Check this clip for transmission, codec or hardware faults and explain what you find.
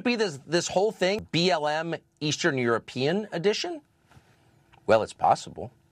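There's one fault in this speech clip, at about 1.19 s, right after "be this this whole". It's damaged data in a compressed stream. A chunk of the encoded stream was corrupted, so the decoder couldn't make sense of the frame there, lost sync and had to hunt for the next valid frame header before it could carry on. You hear it as a brief glitch at that point.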